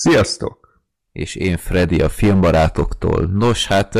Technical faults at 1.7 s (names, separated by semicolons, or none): hard clipping